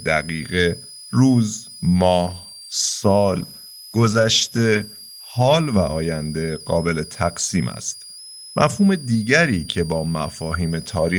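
A switching supply whistle runs under the speech the whole way through: a thin tone wandering between about 4.63 and 5.14 kHz, sitting roughly 20 dB below the voice. That's a power supply in audible burst mode or beating with another one, shifting pitch as its load changes.

From 2.33 s to 5.71 s there's a call bitrate drop. The bandwidth estimate sagged, so the encoder starved the speech of bits, which fits a fall from around 40 kbps to about 17 kbps, sitting at the bottom for about 3.3 s. The voice turns rough and watery, with the top end dulled, until it recovers.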